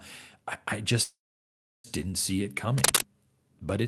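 Call audio freeze, 1.03 to 1.87 s, after "I I": likely delayed packets emptying the jitter buffer. The sound fades into silence, then "didn't see it" resumes intact, 0.81 s late.

Cable scratch noise, 2.78 to 3.01 s, just after "didn't see it": likely a worn contact shifting, adding rough, uneven scratching bursts slightly louder than the speech.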